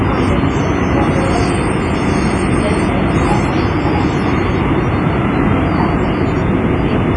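A recording of sounds with heavy codec damage running the whole way through. Transients ring and smear into a washy tail, and there's a hiss that swells and fades with the sound itself rather than sitting steady underneath. Nothing above about 10.5 kHz survives, so the top end is cut off sharply. The likely cause is WMA compression with long transform blocks at a low bitrate, something like 24 kbps, which spreads quantisation noise over tens of milliseconds and zeroes the weaker components.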